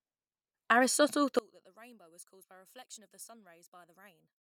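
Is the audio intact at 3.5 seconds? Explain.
No. From 1.39 s to the end, the speech nearly vanishes, about 27 dB quieter, leaving a faint trace. This is likely one channel inverted. With one stereo channel's polarity reversed, the centred voice cancels when both channels are summed to mono.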